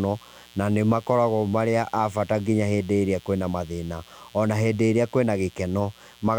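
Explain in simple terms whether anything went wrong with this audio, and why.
A mains buzz runs faintly under the speech from start to finish. It is raspy rather than a smooth hum because sharp electrical spikes from the 60 Hz power supply leak in.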